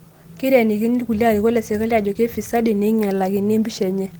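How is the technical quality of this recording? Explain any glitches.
The technical quality of this recording holds up, with no glitches to explain.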